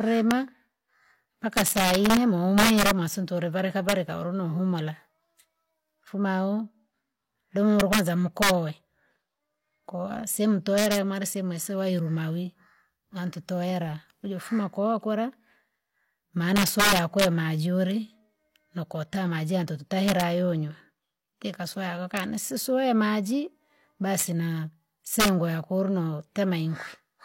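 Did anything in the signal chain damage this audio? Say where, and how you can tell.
Yes. There's integer overflow throughout this speech clip, and it sits in the fixed-point gain or sample-format conversion stage. The tell is the loudest peaks: instead of flattening like clipping, they crack, because the signal was pushed about 6 dB past the integer limit and those samples wrapped around to the opposite sign rather than being held at the ceiling. Only a small fraction of samples, well under one percent, went over, so the damage lands on the peaks.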